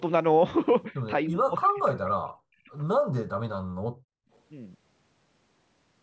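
From 1.28 to 2.7 s, the talker's speech sinks in and out for about a second in total, falling by roughly 40 dB at its deepest. This is speech suppressed in double talk, likely from an echo canceller that heard both sides at once and muted the near talker. The losses follow the overlap, not pauses in the room.

Between 3.67 and 4.29 s, the background is gated by the echo canceller. The room sound drops by about 34 dB for around half a second while the far end plays, then returns. Here the talker's voice isn't being chopped; only the ambient floor vanishes.

At 4.34 to 4.38 s a faint echo leak appears: a brief copy of the voice arriving 304 ms late, some 40 dB under the speech. A far-end loudspeaker path is likely the source, with residual echo slipping past cancellation. Unlike the dropouts, this adds sound rather than removing it, and it sits within the call band that tops out at 8 kHz.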